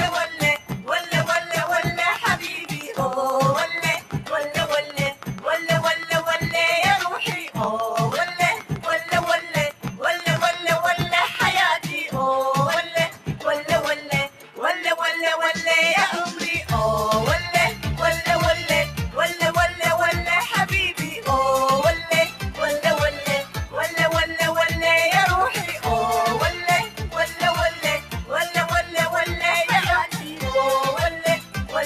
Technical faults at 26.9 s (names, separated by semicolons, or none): noise suppressor applied to music or sounds; sound cut by the noise suppressor